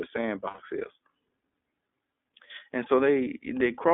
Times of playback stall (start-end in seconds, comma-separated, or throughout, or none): none